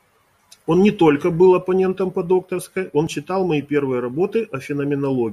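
At 3.07 s, right after "оппонентом по докторской он" and before "читал мои первые", the speech gives a tiny skip that is over almost as soon as it starts. This is an overlap between stream segments: two adjacent pieces of the stream claimed the same stretch of time, and the player discarded the overlapping portion even though that audio was not actually duplicated. About 5 ms of real sound vanished, so the waveform jumps abruptly at the join.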